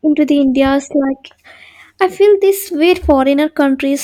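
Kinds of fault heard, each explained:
Hard clipping: the speech peaks exceed what a stage in the chain can pass, so their tops are sliced flat and sharp upper harmonics appear. Just after "feel this way", from 2.91 to 3.12 s, the overload is only about 2 dB, and a briefer one at 3.60 to 3.64 s is about 1 dB, so it comes through as brief crackle on the loudest moments rather than steady fuzz. That abrupt edge separates it from the rounded thickening of soft saturation.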